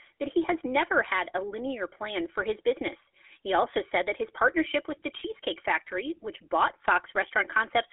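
Speech heard through the GSM full-rate codec for the whole clip, sitting in a telephone band of roughly 300 Hz to 3.4 kHz, which fits a 13 kbps coding. The codec rebuilds the voice from a vocal-tract model driven by sparse pulses, which leaves a plainly audible buzzy, gravelly roughness over every phrase.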